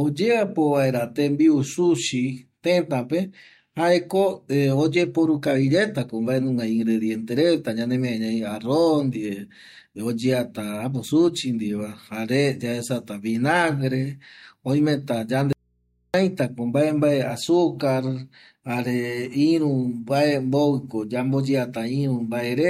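At 15.53 s the speech drops out abruptly and doesn't return until 16.14 s, so there's a hole of roughly 0.61 s. It's an audio dropout to a faint residue. The gap isn't silent but holds a low mains hum, something like 45 dB below the speech. It starts and ends too suddenly to be a natural pause. Most likely the source feed was lost for a moment while the input after it stayed open and picked up hum.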